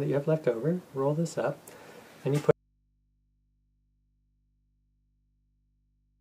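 At 2.51 s the sound cuts off abruptly and never returns, an audio dropout to a faint residue that runs to the end of the clip. The wanted signal has likely been lost while the path after the break stayed live, so the gap is left with only a low mains hum some 50 dB below the earlier level. On a waveform the envelope collapses to a thin band at that instant, and a spectrogram shows the broadband energy vanishing, leaving faint horizontal hum lines at the bottom.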